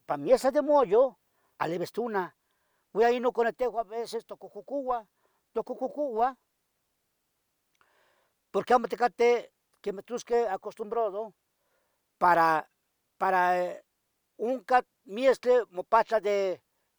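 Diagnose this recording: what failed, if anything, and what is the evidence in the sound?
Nothing in the chain from capture to playback has failed: the speech signal stays steady and continuous, with no audible disturbance at any point.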